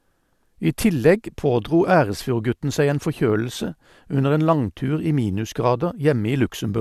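No technical faults can be heard anywhere in the recording. Nothing in the speech stands out as needing to be flagged at any point.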